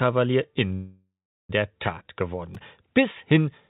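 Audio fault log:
0.74–1.51 s, call audio freeze: For about 0.75 s the audio stops moving forward. The last sound carries on as a fading buzz or hiss that settles into roughly 0.39 s of silence before playback resumes exactly where it left off. This is likely packets held up in transit, draining the jitter buffer, with the receiver concealing the wait. Nothing is lost, but everything afterwards arrives about 751 ms later, and the patched stretch stays band-limited below 4 kHz like the rest of the G.711 call audio.
2.55 s, repeated buffer: A tiny slice of audio, about 2.67 ms, plays three extra times in a row, with a hard join at every repeat. At this size the repetition is too fast to hear as a stutter and comes across as a brief click or buzz. The slice length fits a 128-sample buffer that the playback device replayed because fresh audio hadn't arrived in time. Almost no audio is dropped.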